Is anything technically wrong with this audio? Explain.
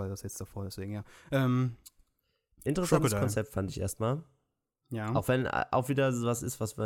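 No, nothing technical stands out here; this speech recording sounds fine to me from beginning to end.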